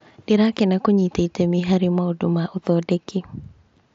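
Nothing goes wrong anywhere in this speech clip, which comes over a Bluetooth mSBC headset link that carries the sound up to about 7.7 kHz with nothing above that.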